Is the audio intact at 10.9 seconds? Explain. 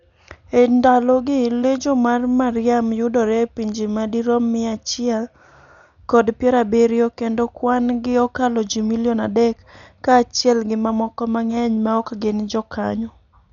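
No. At 10.9 seconds, as throughout the speech, the sound is dull and carries a rough, fluttering noise around its tones, heavy damage of the kind left by Dolby Digital compression, which is the likely cause. Starved of bits, the encoder cut the band and left many frequency lines empty, to be filled with noise, which fits a stream near 48 kbps. A spectrogram would show nothing above 7 kHz and grainy, speckled texture around the harmonics.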